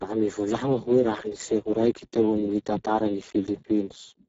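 From start to finish the speech carries heavy Speex codec damage. With so few bits left for the excitation, the voice sounds hoarse and noisy, which points to a very low bitrate of roughly 6 kbps. On a spectrogram, harmonics below 4 kHz look smeared and grainy, the 4 kHz to 7.7 kHz band shows only diffuse, shaped noise rather than harmonic structure, and everything above 7.7 kHz is blank.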